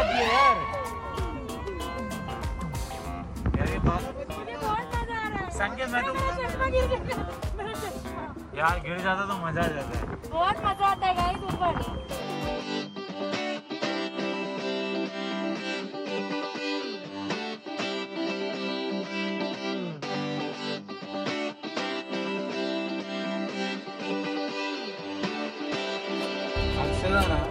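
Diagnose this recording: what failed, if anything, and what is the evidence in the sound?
A feedback whistle runs from 10.57 to 13.2 s: a thin, steady tone at 3.2 kHz sitting roughly 25 dB under the sound, swelling and fading slowly in level. The fault is in the analogue acoustic path ahead of the converter, and it is most likely a loudspeaker-to-microphone loop held right at its stability limit. Gain around that loop reaches unity near 3.2 kHz, so that single frequency keeps recirculating without building into a runaway howl.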